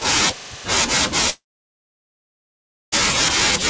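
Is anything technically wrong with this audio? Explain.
Yes. From 1.30 s to 2.94 s there is a long network dropout. The stream likely stopped arriving, so the receiver stretched the last sound into a short fading buzz, then about 1.5 s of silence, and the speech resumes with roughly 1.6 s missing.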